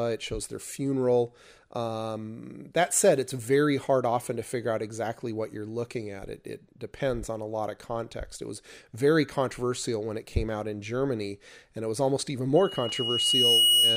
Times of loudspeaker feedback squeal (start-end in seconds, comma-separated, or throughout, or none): 12.56-13.97